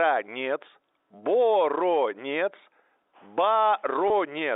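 At 4.08 s, packet loss with pitch repetition bridges a 20 ms gap, consistent with a single lost packet. The receiver repeats the last pitch period, so the speech briefly holds a slightly buzzy tone instead of dropping to silence or clicking, within G.711's narrow telephone band.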